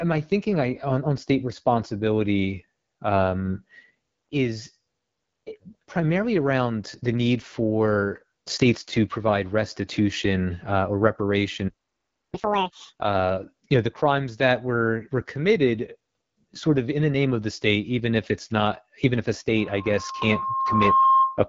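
Speech runs through an AMR wideband (HD Voice) codec for its whole length, and the damage is plainly audible. The voice is rough and raspy, with nothing above about 7.6 kHz, which fits one of the low AMR-WB modes around 8.85 kbit/s. The grain is what sets it apart from a clean band limit, since a simple low-pass filter would only dull the sound. At 11.68 s a playback stall cuts the audio to complete silence for about 0.65 s, until 12.34 s, likely because the player ran short of buffered data. It is not a dropout, because the sound picks up exactly where it stopped, with nothing skipped. From 12.34 to 12.99 s, just before "uh you know the", comes catch-up at higher speed. The backlog plays at double speed, with pitch raised by roughly ten semitones, and then drops back to normal. It differs from a deliberate pitch shift because tempo and pitch rise together, and only right after the gap. 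From 19.55 s, just after "not even if a", a loudspeaker feedback squeal builds on a single 1.1 kHz tone. It swells over about a second and a half to roughly 5 dB above the speech, lasting until 21.45 s. Its growth from quiet to dominant marks it as a feedback loop, not a steady interference whine.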